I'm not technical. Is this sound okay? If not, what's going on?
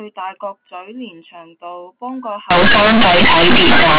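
No. From about 2.5 s to the end, the speech turns into loud, harsh buzzing. This is companded audio read as linear: telephone-coded mu-law bytes are played as ordinary samples without decoding, so quiet moments blast as loudly as speech and the sound is badly distorted.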